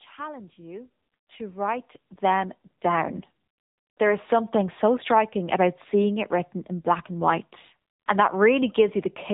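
The speech has passed through the AMR narrowband mobile codec for its whole length. This codec samples at 8 kHz and rebuilds the voice from a vocal-tract model excited by a handful of pulses per short frame, so fine detail is discarded. Nothing above about 3.8 kHz survives, which gives a muffled, telephone-band sound, and the clearly buzzy, synthetic edge on the voice points to one of the lower bitrate modes, near 8 kbps.

At 2.04 s the microphone volume is stepped up. The calling software judged the input too quiet and raised the device's capture gain in a single jump of about 5 dB. Because the change happens at the input, the voice and any background rise together at that instant, with no fade, so the level abruptly steps louder and stays there.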